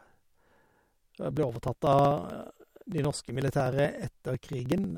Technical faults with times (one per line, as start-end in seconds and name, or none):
0.07-4.91 periodic USB or driver dropouts